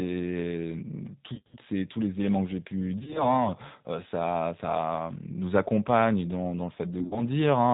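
From start to finish the speech carries plainly audible G.729 codec damage. Nothing above 4 kHz survives, and the pulse-based excitation gives a rough, slightly synthetic edge, which fits 8 kbit/s G.729A coding with the voice rebuilt from a filter and pitch model.

VoIP packet loss concealed by the speech codec appears at 1.34–1.56 s, 2.99–3.45 s and 7.00–7.23 s. Lost packets, in runs of up to 50 ms, are bridged by extrapolating the last frame. The result is buzzy or noisy, fading stretches, and the voice stays weakened briefly afterwards.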